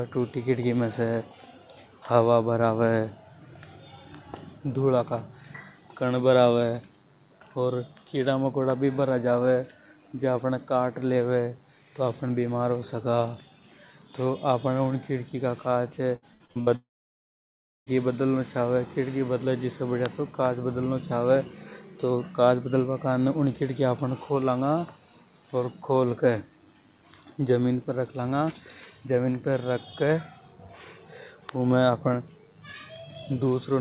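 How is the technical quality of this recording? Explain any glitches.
The recording has two glitches close together, both in the middle of the clip, and the sound is band-limited throughout, with nothing above 4 kHz, which fits a narrowband G.711 mu-law call codec.

From 16.16 to 16.70 s the speech turns choppy and robotic, with small pieces missing. This is repeated packet loss: five short gaps, the longest about 61 ms, were each patched by extending the last sound. Nearly half of that half-second is filled-in audio rather than real speech.

Right after, from 16.76 to 17.89 s, the speech briefly smears into a fading continuation and then goes silent for roughly a second before resuming with that stretch simply gone. This is most likely a long network dropout, where no audio arrived and the receiver could only extend the last sound briefly before falling silent.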